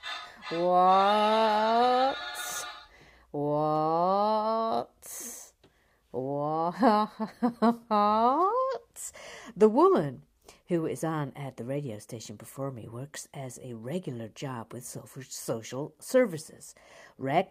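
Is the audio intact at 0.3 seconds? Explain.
Yes, the audio is intact at 0.3 seconds, with no fault present at that moment.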